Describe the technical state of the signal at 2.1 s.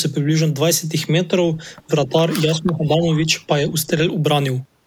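Speech suppressed in double talk occurs from 2.06 to 2.12 s. The speech level briefly sinks by about 5 dB, a short, shallow dip lasting roughly 70 ms before the level recovers. The likely cause is an echo canceller that heard both ends talking at once and, unable to tell the near talker apart from loudspeaker echo, pulled down the whole signal rather than only the echo.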